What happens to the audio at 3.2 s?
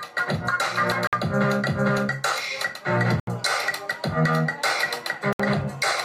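A Bluetooth stall is the likely cause. Radio interference appears to have delayed the wireless packets long enough for the receiving headphones to exhaust their playback buffer, so output halted until the retransmitted data arrived. From 3.20 to 3.28 s the audio drops out completely, leaving a gap of about 76 ms of silence. The sound then resumes, just an abrupt cut followed by an abrupt return.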